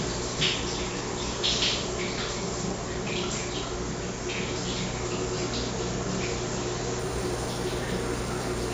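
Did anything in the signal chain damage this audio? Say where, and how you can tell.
Yes. From 6.99 s to the end at 8.74 s, the sample-rate conversion stage shows imaging from linear upsampling. The top of the original band turns dull, and a faint metallic shimmer sits between 8 and 16 kHz, roughly 20 dB below the signal. This fits a 16 kHz source raised to 48 kHz by straight-line interpolation, which leaves mirror copies of the spectrum above the old band edge. Aliasing would fold tones down into the band instead.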